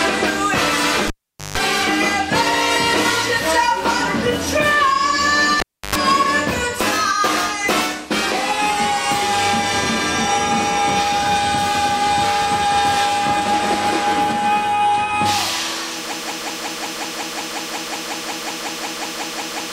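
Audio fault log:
1.07–1.58 s and 5.60–5.95 s: cable pulled and plugged in. Each event opens with a pop and drops to near silence for 454 ms, then 308 ms. A 50 Hz mains buzz follows for 156 ms, then 94 ms, as only the plug tip touches. A second pop marks the return of the sound.
16.13 s to end: broken-record loop. A 182.5 ms fragment repeats exactly, back to back, 20 times until the clip ends. The audio due in that span is gone. The likely cause is a stalled player, encoder or stream resending its last buffer.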